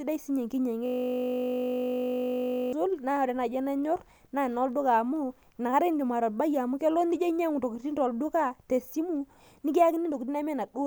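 From 0.86 to 2.73 s, a system hang loop occurs: the computer or driver stalled while the sound hardware kept replaying one 20 ms stretch of its ring buffer. That speech fragment repeats over ninety times, fusing into a steady 50 Hz buzz.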